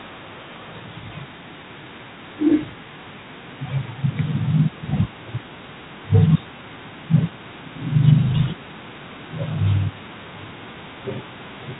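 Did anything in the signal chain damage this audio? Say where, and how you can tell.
Yes. G.726 ADPCM damage runs throughout, at the codec stage: the speech carries a harsh, rasping hiss that rises and falls with its level, and nothing passes above 4 kHz. Coarse difference coding against an adaptive prediction causes this, which fits the 24 kbit/s mode.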